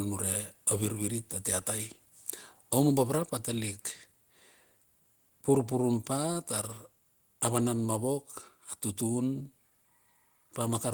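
At 3.18 s the whole signal, speech and background together, drops by about 2 dB in a single step and stays at the new level. This is a microphone volume stepped down event, likely the call software lowering the device's input volume after judging it too hot. Unlike automatic gain control, which rides the level smoothly up and down, this change is instantaneous, affects the room tone equally, and never recovers.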